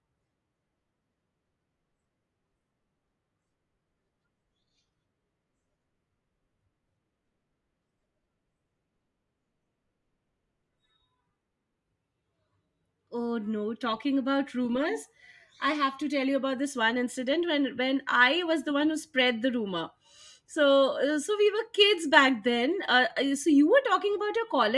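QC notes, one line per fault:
No audible faults found anywhere in this recording.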